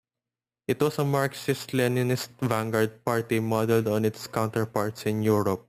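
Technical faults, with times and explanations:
Throughout, imaging from sample-and-hold upsampling: a bright metallic fizz rises and falls with the speech, about 20 dB below it, its lowest copy filling 6 to 12 kHz. Each sample was repeated without smoothing, mirroring the spectrum, which fits 12 kHz audio raised to 48 kHz.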